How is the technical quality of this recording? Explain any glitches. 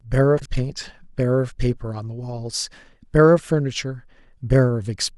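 There's one glitch early on, between 0.37 and 0.46 s: frames out of order. Two neighbouring chunks of roughly 40 ms each got swapped, so that bit plays back-to-front in halves, giving a brief garbled flutter. Nothing's actually missing, just reordered.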